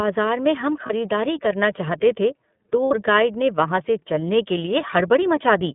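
The speech passes through the iLBC codec for its whole length, coding it in independent frames at a low rate that fits iLBC's 13.33 kbps, 30 ms mode. The audio is confined to a narrow band from about 150 Hz to 3.6 kHz, so it sounds thin and telephone-like, with no air or sibilance above that. The coding damage is plainly audible as a rough, slightly synthetic texture on every voiced stretch.

At 0.86 to 0.93 s, between "में हम" and "करना चाहते थे", packets go missing: lost iLBC frames, about 30 ms of audio, which points to a single 30 ms frame. The decoder fills the hole by repeating the last pitch cycle with noise mixed in, heard as a brief held, buzzy vowel. A second loss at 2.85 to 2.92 s, between "करना चाहते थे" and "गाइड ने", covers about 60 ms, which suggests two consecutive frames. The concealed sound is held twice as long. Because each iLBC frame decodes on its own, the voice comes back right almost at once after both gaps.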